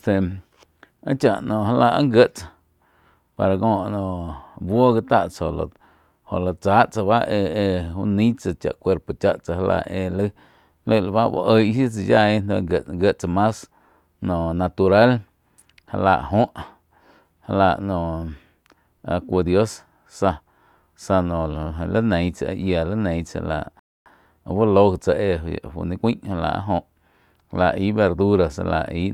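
At 23.79 s the speech halts in a rebuffering stall: playback runs dry, holds silence for about 265 ms, then resumes exactly where it stopped.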